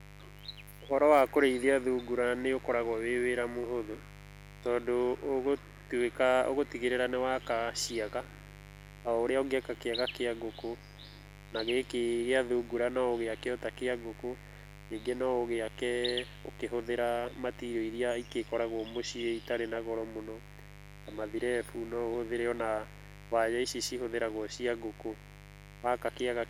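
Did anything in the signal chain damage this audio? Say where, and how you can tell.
Yes. Mains buzz entered in the analogue wiring and runs through the whole speech clip, roughly 20 dB below the voice. It is a steady, raspy buzz built on 50 Hz harmonics: switching spikes, twice per mains cycle, coupled in through poor shielding or a nearby rectifier or dimmer.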